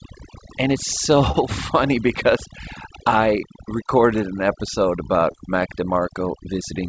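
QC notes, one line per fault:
throughout, overdone noise removal: A noise suppressor was driven far too hard, pushing individual frequency bands down or out whenever they sat close to its noise estimate, and it took the quieter parts of the speech along with the noise. The pauses fall to near silence dotted with twinkling specks. The audio stops at 8 kHz, which fits a wideband call codec.
1.32–1.36 s and 5.32–5.36 s, short concealed packet loss: About 20 ms of audio failed to reach the decoder in time at each point, just before "funny because I recorded" and just after "I recorded an episode". The receiver covered each hole by extending the preceding sound for roughly 19 ms and 17 ms, then blended back into the real signal. Each spot is heard as a brief smear or wobble.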